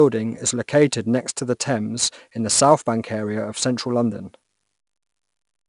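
From start to finish the speech carries 4-bit ADPCM compression damage, and it is plainly audible. Each sample is coded as a coarse 4-bit step from a predicted value, so the quantisation error becomes a gritty hiss that rises and falls with the speech level. Sharp onsets sound roughened where the adaptive step lags behind the signal. Nothing is present above 10.5 kHz, which fits a bitrate around 88 kbps.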